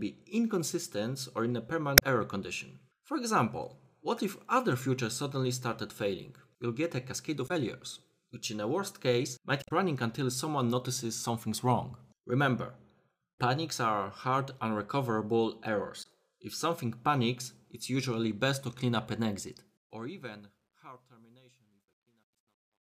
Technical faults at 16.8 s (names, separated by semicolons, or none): none